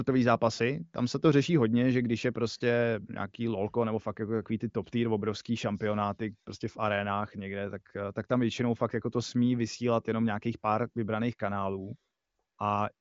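No faults are audible anywhere in this speech.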